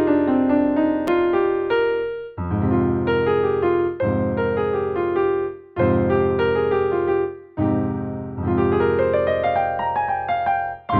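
A repeated buffer at 1.07 s: new audio arrived late, so a 5.8 ms piece, which fits a 256-sample buffer, played twice, heard as a brief click.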